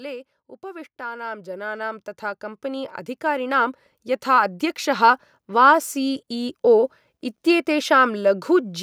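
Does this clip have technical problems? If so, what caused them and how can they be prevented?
Yes. From 0.61 s to 5.19 s there is automatic gain rising. The level climbs steadily by about 16 dB. The gain control judged the input too quiet and kept raising it. Voice and background noise swell together. To prevent it, disable automatic gain control and set a fixed input level.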